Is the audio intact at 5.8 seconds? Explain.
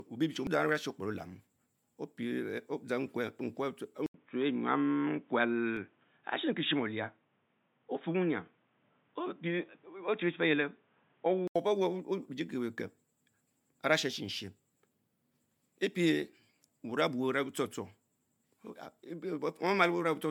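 No. At 5.77 s there is a block of digital silence lasting 2.9 ms. The sound cuts out and returns with no fade. The hard edges produce a short tick. Its length fits an unfilled 128-sample buffer.

That moment also falls inside a stretch from 4.06 to 11.56 s where the input was likely switched to a poorer device. Nothing passes above 3.8 kHz, so the sound turns dull and boxy. An 80 ms silence marks the switch. New background noise sits about 40 dB down. The level stays roughly unchanged.

Generation loss runs through the whole clip. It sounds like MP3 at 128 kbit/s, likely decoded and re-encoded about seven times. Each pass adds fresh quantisation noise and spectral holes. The result is swirly, smeared and hollow, with blurred attacks. Nothing is present above 19.9 kHz.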